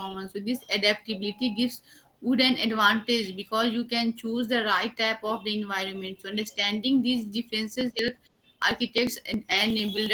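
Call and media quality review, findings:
Opus voice compression, whole clip: encoder at 16 kbps in hybrid mode, fullband, 20 ms frames, SILK coding the low band with a CELT layer above 8 kHz. Coarse excitation coding leaves speech plainly muffled, hoarse, slightly robotic.

Periodic USB or driver dropouts, 7.81 to 10.06 s: bus or audio driver blocked every 0.09 s, roughly 10 ms of audio skipped each time, around thirty gaps. Heard as an evenly spaced train of ticks over the speech.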